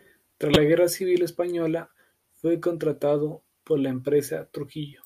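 At 0.53 to 0.56 s the speech is hit by a corrupt frame decoded. Flipped bits in one compressed frame were played anyway. Energy lands at wrong frequencies for that frame's length. It sounds like a sharp chirp or blip, quite loud.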